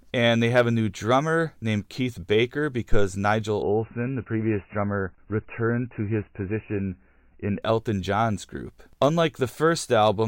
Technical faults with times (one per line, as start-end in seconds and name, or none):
3.62-7.62 adaptive stream at a lower bitrate